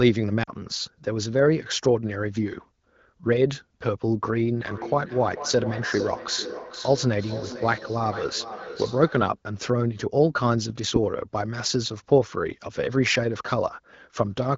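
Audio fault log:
0.43–0.51 s, lost AMR speech frames: about 40 ms of sound is briefly smeared as the decoder repeats its last good pitch and vocal tract settings with falling gain. Unlike a plain dropout, the gap fades to near silence within two frames rather than cutting off cleanly, with a weak, rough return.
4.67–9.39 s, feedback echo between two devices: the sound comes round again as distinct copies about every 0.4 s, at most about 12 dB below the direct signal, each thinner and more ringing. A second device's microphone is re-capturing what the first plays. Unlike room reverberation, these are separate repeats at a fixed spacing rather than a smooth decaying tail.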